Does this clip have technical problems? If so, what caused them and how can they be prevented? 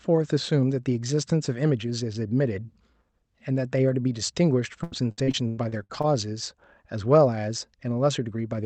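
Yes. Repeated packet loss (robotic sound) runs from 4.67 to 6.05 s. Eight gaps, the longest 97 ms, get patched by stretching earlier sound. This leaves choppy, robotic speech. Prevent it with a steadier network path and stronger packet-loss protection.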